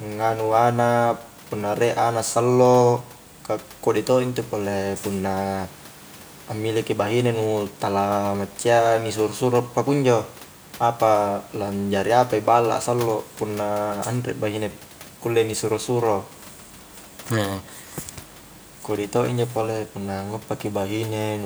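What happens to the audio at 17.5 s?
Nothing goes wrong at 17.5 s. The speech carries on intact, with only the room noise about 24 dB below it.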